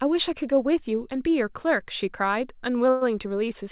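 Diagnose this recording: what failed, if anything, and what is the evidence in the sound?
From 2.90 to 3.03 s the speech stalls, its last sound drawn out into a fading buzz, then picks up exactly where it stopped with nothing lost. This is a call audio freeze at the jitter-buffer stage. Packets likely arrived late, so the receiver filled 112 ms and pushed everything after it later.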